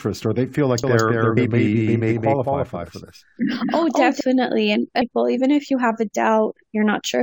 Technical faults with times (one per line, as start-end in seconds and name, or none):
0.84-4.21 doubled audio track
1.36 damaged data in a compressed stream
5.00 damaged data in a compressed stream